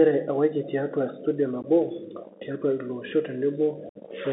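The whole clip sounds narrow and grainy, with a granular hiss under the speech, scratchy s sounds, and nothing above about 3.6 kHz or below about 200 Hz. This is the Bluetooth CVSD headset codec, which fits a 64 kbps link. Its one-bit, adaptive-step coding cannot keep up with fast, loud changes.

Just after "ewaki tiatua studio", from 1.62 to 1.65 s, there is a brief abrupt hole of about 15 ms. A longer 60 ms gap follows from 3.89 to 3.98 s. Both are unconcealed Bluetooth headset packet loss: a couple of packets, then several, were dropped between headset and phone, and nothing filled them in.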